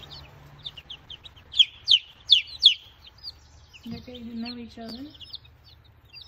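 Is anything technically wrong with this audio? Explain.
Yes, two things. From 0.53 to 2.47 s there's a call bitrate drop, about 64 down to 12 kbps. The encoder starves, so the sound goes rough and muffled for nearly two seconds.

Around 4.89 to 4.91 s, chunks play out of order: one 10 ms piece arrives a chunk late, leaving hard joins heard as a brief jumbled moment.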